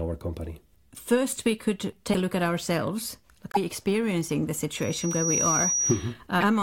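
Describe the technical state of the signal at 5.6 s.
At 5.6 s the signal is in the middle of a loudspeaker feedback squeal that runs from 4.75 s to 6.13 s, right after "experiencing the". The loudspeaker's output reaches the microphone and recirculates. The loop gain exceeds unity near 5.8 kHz, so a single piercing tone swells over roughly half a second. It then sits at about the level of the speech.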